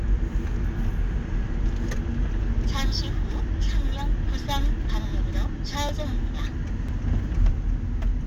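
From 4.90 s to 7.89 s, periodic USB or driver dropouts occur about once every second, four times in all. Each time, something blocks the audio path and roughly a millisecond of sound is skipped outright, leaving a small jump in the signal. These jumps are heard as evenly spaced ticks. On a waveform, each tick is a sudden step where the trace doesn't join up. On a spectrogram, each is a thin vertical broadband line.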